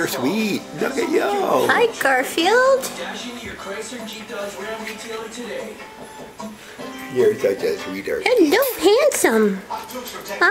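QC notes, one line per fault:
Nothing to flag here: I listened all the way along and didn't hear anything go wrong with the audio at any point.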